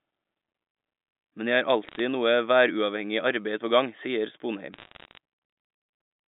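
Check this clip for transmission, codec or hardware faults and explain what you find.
Two bursts of bit errors on a digital phone line, carried over band-limited G.711 telephone audio. After "jeg har", 1.85 to 1.99 s, then after "arbeid på gang sier", 4.73 to 5.17 s. A fraction of a percent of bits flip, corrupting single samples into sharp crackling ticks.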